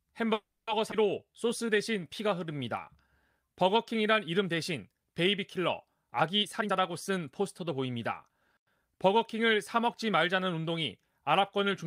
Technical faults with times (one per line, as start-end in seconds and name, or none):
0.33-0.69 call audio freeze
0.91-0.94 skip ahead
1.25-2.59 jitter buffer slow-down
6.39-8.99 jitter buffer speed-up